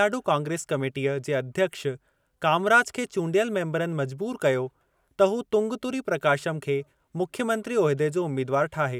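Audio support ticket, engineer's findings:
No audible fault found on the speech recording. Nothing in the signal points to a component needing attention.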